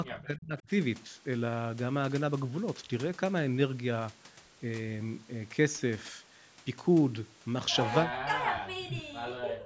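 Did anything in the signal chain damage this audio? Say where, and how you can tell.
Yes, at the call-processing stage, most likely the echo canceller suppressing speech in double talk, treating the near talker as loudspeaker echo during overlapping speech. The speech sinks by as much as about 40 dB from 0.05 to 0.69 s, again from 8.03 to 8.25 s, and from 8.48 s through the end of the clip. These dips in the voice point to suppression. The 8 kHz band limit comes from the microphone processing.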